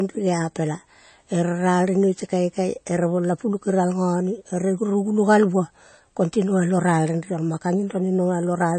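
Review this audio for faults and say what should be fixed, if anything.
Throughout the speech, nothing survives above 8.3 kHz and the sound turns watery and swirly, likely from MP3 compression at a bitrate as low as 32 kbps. Flickering spectral holes, not just dullness, separate it from plain low-pass filtering. Prevent it by encoding at a higher bitrate or keeping a lossless master.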